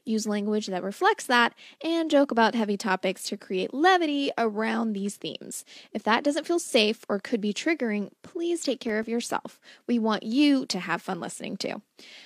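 Just after "could be triggering please", from 8.62 to 9.58 s, eight regular ticks and tiny dropouts, each no more than a few milliseconds, come at uneven strength. These are CD scratch ticks: a blemish on the disc defeats error correction once per turn, so the player interpolates or mutes the damaged samples.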